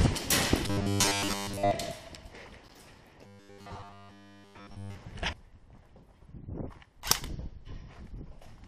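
The audio goes robotic twice, from 0.67 to 1.71 s and again from 3.26 to 4.97 s, turning into a rigid, metallic buzz pitched at 100 Hz. That's likely robotic sound from repeated short buffers: new audio arrived too slowly, so a 10 ms chunk kept being replayed while most of the real audio was skipped. At 2.68 s there's a hard-edged hole of about 12 ms, a gap between stream segments. It fits 6-second segments whose time stamps don't quite meet, with silence filling the difference and nothing actually lost.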